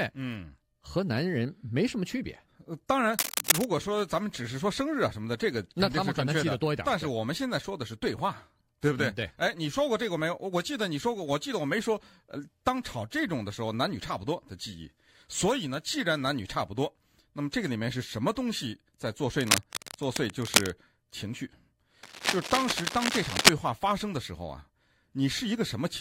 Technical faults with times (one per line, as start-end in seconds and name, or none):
3.14-3.71 cable scratch noise
19.40-20.74 cable scratch noise
22.03-23.49 cable scratch noise